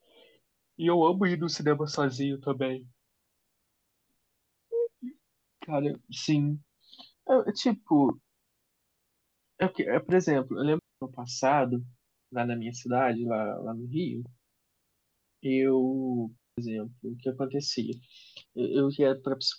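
A digital wireless dropout occurs twice: the radio link lost too much data, so the receiver muted its output with a very quick fade rather than passing corrupted audio. At 10.79 s the speech stops into near silence for about 230 ms, resuming at 11.02 s; at 16.37 s a second gap of about 200 ms runs to 16.58 s. Each is a clean hole, with no crackle or noise burst on either side.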